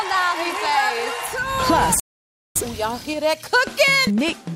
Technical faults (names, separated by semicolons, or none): rebuffering stall